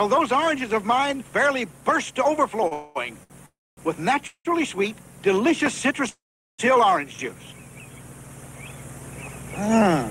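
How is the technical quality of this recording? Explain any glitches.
The recording has a cluster of timing faults between about 2.7 and 6.6 s. Six places where the sound stops moving forward are each followed by a clean resumption, so nothing is lost, but the timing is repeatedly pushed back.

Two short stalls from a late packet occur, at 2.67 to 2.73 s and at 3.23 to 3.32 s. Each time, the next packet had not arrived when it was due and the jitter buffer emptied. The receiver held the last sound for about 37 ms and then about 65 ms until the data caught up, and playback then continued from the same point. These sound like a brief unnatural sustain with a faint buzzy edge.

Four longer call audio freezes follow, at 2.73 to 2.97 s, 3.46 to 3.79 s, 4.27 to 4.47 s and 6.09 to 6.60 s, adding roughly 223, 312, 179 and 495 ms of delay. The likely cause is packets held up in transit, so the buffer ran dry and the receiver padded the gap by extending the last sound as a fading buzz. 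In the first freeze that fill never drops to silence. The other three decay into silence for about 240 ms, 70 ms and 400 ms respectively. The audio then resumes where it stopped, with nothing missing.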